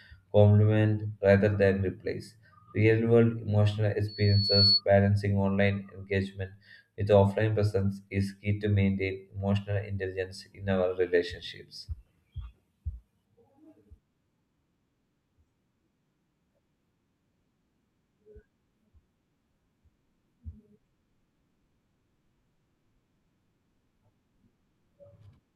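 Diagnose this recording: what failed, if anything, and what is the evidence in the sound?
Loudspeaker feedback squeal in the analogue acoustic path, from 4.08 to 4.81 s, between "world emotional" and "balancing online engagement with". A single 4.4 kHz tone swells over about half a second to roughly 5 dB above the speech. The microphone is picking up its own loudspeaker, with loop gain above unity at that frequency.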